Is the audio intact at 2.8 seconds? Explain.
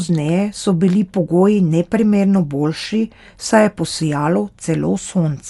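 No. At 2.8 seconds the speech carries the same damage heard across the whole clip, most likely from Dolby Digital compression at a low bitrate, which fits roughly 64 kbps. The encoder cut the band and left many frequency lines without detail, so the decoder filled them with noise. The speech sounds dull and rough around its tones. A spectrogram shows a hard ceiling with nothing above 11.5 kHz and speckled, patchy energy below it.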